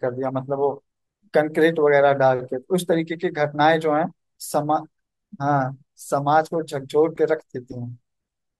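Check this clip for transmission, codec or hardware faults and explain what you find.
Nothing turned up here: the speech runs along without any transmission, codec or hardware faults worth flagging.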